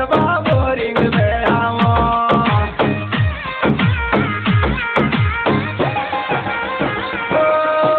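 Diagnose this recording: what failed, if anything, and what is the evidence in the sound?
Nothing has failed in this recording: the signal path from capture through to playback holds steady, with no break, distortion or disturbance anywhere in the sound.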